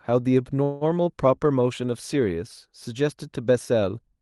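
From 0.63 to 0.84 s there is a call audio freeze, likely from packets stalling so the jitter buffer ran dry. The last sound stretches into a fading buzz or hiss for about 176 ms. The speech then resumes where it stopped, nothing lost, just pushed later. On a spectrogram this appears as smeared horizontal bands that decay, with content above about 12 kHz absent from the Opus path.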